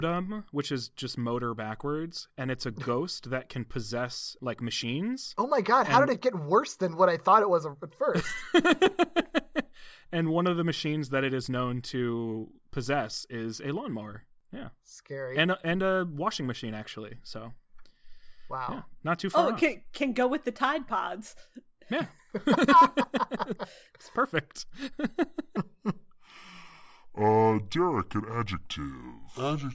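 From 25.57 s to the end, the speech drops into a wrong sample rate fault. The audio plays at about two-thirds speed, 0.667 times, with pitch down about 7 semitones. It sounds low and slow, which fits 24 kHz audio played at 16 kHz.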